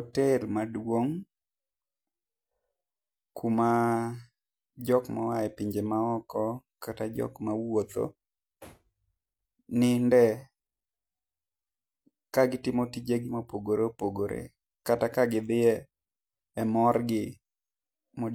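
Nothing in this recording of speech stands out as a technical fault; there's no glitch, dropout or distortion anywhere to point to.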